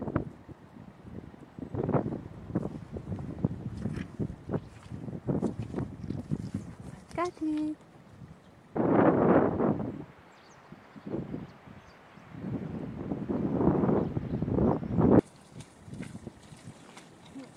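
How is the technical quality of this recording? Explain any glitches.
No glitches can be heard anywhere in this recording. Nothing in the audio calls for a technical explanation.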